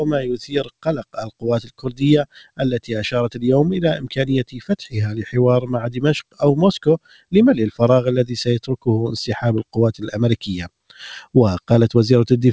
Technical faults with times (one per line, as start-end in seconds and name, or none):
0.00-12.52 noise suppressor applied to music or sounds
0.18-2.90 sound cut by the noise suppressor
3.96-4.65 sound cut by the noise suppressor
5.61-6.02 sound cut by the noise suppressor
6.98-7.33 sound cut by the noise suppressor